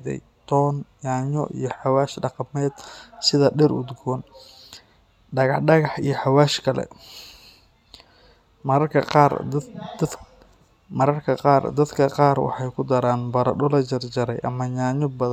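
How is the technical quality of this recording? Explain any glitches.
No glitches or technical faults turn up anywhere in the recording.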